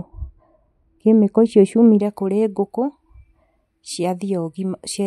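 A de-emphasis filter was applied wrongly from 0 to 2 s, cutting treble that either was never boosted or had already been restored, about 11 dB down at 10 kHz, leaving the speech dull and muffled.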